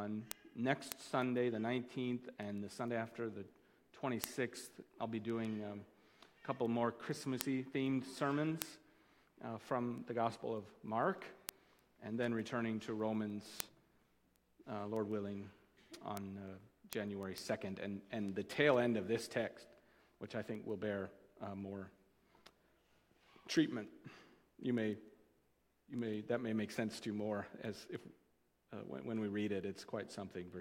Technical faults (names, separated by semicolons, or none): word clock ticks